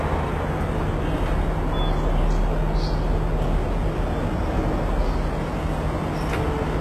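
From start to finish, the treble has a gritty, metallic sheen that does not match the body of the sound. Nothing reaches above about 12.3 kHz. The damage is heavy. The likely cause is HE-AAC compression, here pointing to a very low rate near 16 kbps. Only the lower spectrum is truly coded. The highs are copied up from below and roughly shaped, so their harmonics fail to line up with the real ones.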